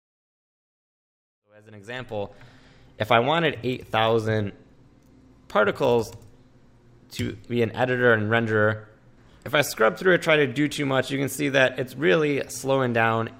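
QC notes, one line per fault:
No faults found; the level rises in a smooth fade-in from roughly 1.5 s to full level at 2.87 s, as intended.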